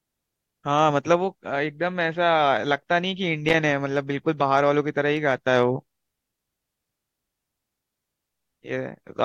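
At 3.48 s, running to 3.54 s, the speech is interrupted by loose connector crackle: a short, ragged burst of scratching lasting under a tenth of a second. A worn or dirty contact somewhere in the cable path briefly loses and regains connection as it shifts, so the signal is chopped on and off in quick, uneven succession. Any DC on the line turns each break into a pop.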